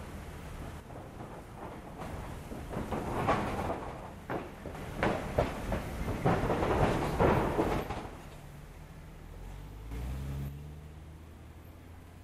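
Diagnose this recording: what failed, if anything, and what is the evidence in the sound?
Level abruptly sinks about 6 dB at 0.80–2.01, 3.69–4.75, 7.79–9.91 and 10.48 s onward. One channel drops out, likely from loose analogue wiring, halving the mono sum.

A single sharp click at 9.27 s reflects dropped samples: roughly one sample is missing, so the waveform jumps, likely from a driver or buffer slip.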